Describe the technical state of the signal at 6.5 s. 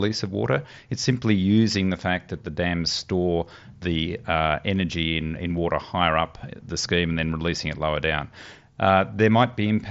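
At 6.5 s the speech is intact, with no fault, and it carries the band limit of the Bluetooth mSBC headset codec path, with nothing above about 7.7 kHz.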